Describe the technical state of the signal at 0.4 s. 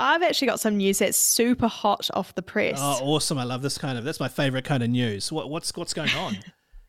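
At 0.4 s the signal is intact, with no dropout, distortion, glitch or other audible fault at that point.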